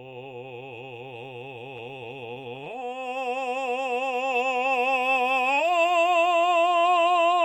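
From 1.77 to 2.96 s the music breaks into repeated stalls (stutter): packets arrived late, draining the jitter buffer again and again, so playback briefly held the last sound, each hold no longer than 16 ms. Nothing is lost, but about 158 ms of stretching makes the passage drag.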